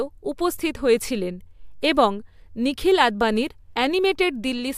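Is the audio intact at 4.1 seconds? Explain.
Yes, the audio is intact at 4.1 seconds, with no fault present at that moment.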